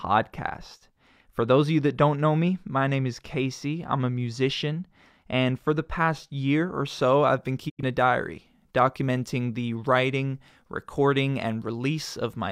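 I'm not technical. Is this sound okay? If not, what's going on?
No. From the start to about 7.0 s, the speech sounds dull and muffled because of de-emphasis applied wrongly: a treble cut meant to reverse a boost was applied when no boost was there, or was applied twice. The top end slopes away gently, not cut off sharply, so nothing sounds missing, just dulled.

At 7.68 s there is a digital broadcast dropout: the receiver lost the signal and muted for about 0.15 s. Unlike a click or a simple glitch, the sound fades quickly to silence and returns, and whatever was said during that gap is gone.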